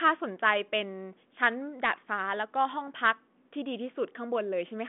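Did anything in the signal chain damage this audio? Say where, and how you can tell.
No, nothing in the chain damaged this audio.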